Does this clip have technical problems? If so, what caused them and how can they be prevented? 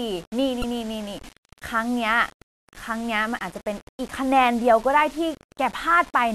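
Yes. Grainy distortion follows the speech throughout the clip, sitting roughly 25 dB below it. The likely cause is low bit depth without dither, which fits rounding to 6 bits. The waveform would show visible stair-steps. The spectrogram would show broadband hash that rises and falls with the speech rather than a steady noise floor. To prevent it, keep at least 16 bits and apply dither before any reduction in bit depth.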